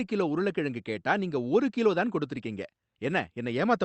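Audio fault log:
No faults can be heard in this speech clip. It has passed through a call path whose codec leaves little above 8 kHz, with a band and texture that fit Opus at around 32 kbps.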